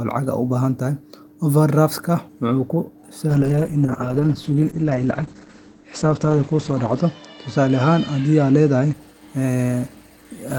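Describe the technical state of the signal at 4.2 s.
At 4.2 s the speech sounds dull and rough, with a watery, smeared texture and no top end: content above 8 kHz is gone where it previously reached 20 kHz. This is a call bitrate drop running from 3.29 s to 8.99 s. The bandwidth estimate fell, forcing the encoder to code more coarsely and narrow its band, which fits a fall from about 32 kbps to around 9 kbps, held at its lowest for roughly 3.7 s.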